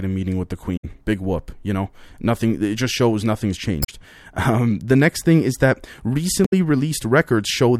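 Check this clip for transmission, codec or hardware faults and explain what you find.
The speech carries one recurring codec fault, heard three times.

Damaged data in a compressed stream appears at 0.76 to 0.85 s after "meeting with the", at 3.82 to 3.89 s after "it just shows nothing's", and at 6.45 to 6.53 s after "next thing is that". Each time, corrupted bytes make the decoder misread its frames, lose sync and hunt for the next valid header. The result is a brief chirp, squawk, click or short hole of under a tenth of a second.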